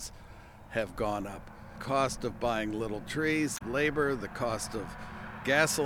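A short, harsh blip cuts into the audio at 3.54 s and lasts about 74 ms, ending at 3.62 s. It is a typical sign of damaged data in a compressed stream. Some of the encoded bytes at that point were lost or corrupted. The decoder produced garbled output for those frames, then lost sync and had to search for the next valid frame header before the audio could carry on.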